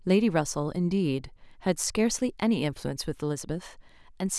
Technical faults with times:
none

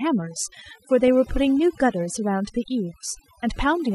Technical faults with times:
0.00-3.95 overdone noise removal
0.00-3.95 MP2 compression
1.08 DAB burbling

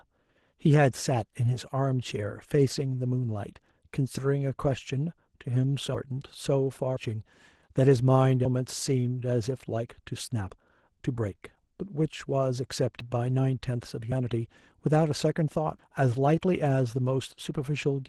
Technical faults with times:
0.00-18.08 Opus voice compression
4.18 dropped buffer (overrun)
5.94 dropped buffer (overrun)
6.97 dropped buffer (overrun)
8.45 dropped buffer (overrun)
10.50 dropped buffer (overrun)
13.00 dropped buffer (overrun)
14.12 dropped buffer (overrun)
15.79 dropped buffer (overrun)

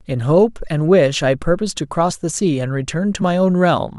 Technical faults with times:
2.09-2.13 compressed frames skipped
3.21 compressed frames skipped

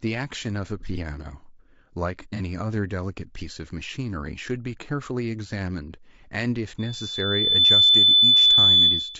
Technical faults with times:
0.00-9.19 low-delay AAC compression
0.80-0.84 AAC frame loss with concealment
2.36-2.41 AAC frame loss with concealment
6.78-9.19 loudspeaker feedback squeal

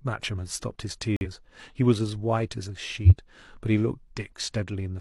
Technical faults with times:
1.16-1.27 corrupt frame muted
3.05-3.13 corrupt frame decoded

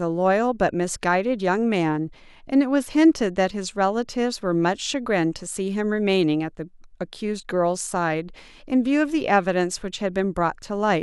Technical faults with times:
none

